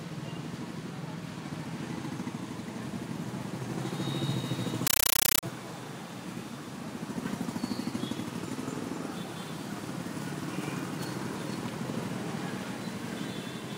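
From 4.87 to 5.43 s, the audio is replaced by loud, harsh, chattering static. This is a compressed stream played as audio. A Dolby Digital (AC-3) bitstream reached the output undecoded and was treated as ordinary samples. Each frame becomes a burst of about 9.3 ms of dense noise, then silence from the zero padding. The bursts repeat 31.25 times a second. That steady rattle fits a 448 kbps AC-3 stream.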